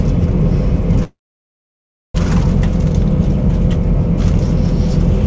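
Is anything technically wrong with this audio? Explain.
Yes. From 1.04 to 2.16 s there is a call audio freeze, likely caused by packets stalling in transit so the jitter buffer ran dry. The last sound is stretched into a brief fading buzz, then about 1 s of silence. When the flow returns, playback resumes exactly where it stopped, so nothing is lost but everything after lands 1.1 s late. On a waveform this is a short decaying tail followed by a flat line. A spectrogram shows a smeared band dying into a blank column, all beneath the 8 kHz ceiling of the G.722 call path at 64 kbps.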